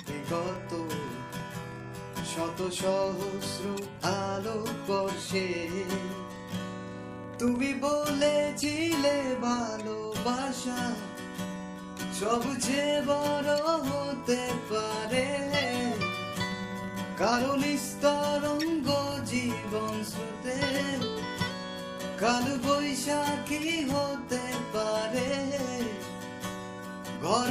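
A filter restarted on every block throughout, starting each from silence; the transients form a 25 Hz buzz, consistent with 40 ms blocks, that tracks the level.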